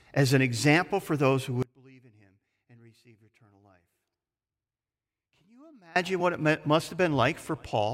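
Speech with an audio dropout to a faint residue from 1.63 s to 5.96 s, about 4.3 s long. The sound cuts abruptly to a faint sound roughly 30 dB down, likely from the feed breaking upstream while the later path stayed live. The waveform collapses to a thin band, and the spectrogram shows a dim gap with sharp edges.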